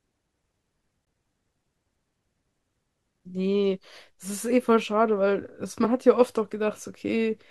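Three times the playback path likely failed to deliver samples in time and left zeros in their place, each a block of digital silence in the speech. The cut in and out is abrupt, with no fade. At 1.05 s the dropout lasts 17.4 ms, a short hole; at 3.20 s a 5.8 ms gap, consistent with a 256-sample buffer, gives a tick; at 5.84 s a 1.4 ms gap is just a tick.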